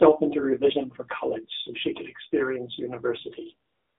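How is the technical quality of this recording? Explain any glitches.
The recording has clear narrowband mobile-codec damage throughout, plus a comfort-noise patch at the end.

AMR narrowband mobile codec, throughout: the speech is confined to about 250 Hz to 3.7 kHz and sounds buzzy and synthetic, which fits a low AMR-NB mode around 7.4 kbps.

AMR comfort noise, 3.68 to 3.98 s: speech frames stop for 300 ms and the receiver substitutes smooth synthetic noise, so the real background switches to a steady hiss.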